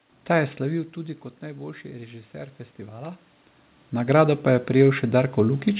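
From 0.32 s to 3.29 s the automatic gain is rising. Around half a second in, the talker moves back, and the level at the microphone falls by about 13 dB. The gain control hears a quiet input and slowly turns itself up, by about 4 dB over three seconds. It does not fully make up the loss. The voice and the room noise swell together. The lift is gradual, not a step. Throughout, nothing reaches above 4 kHz, which points to a narrowband call codec such as G.711 mu-law.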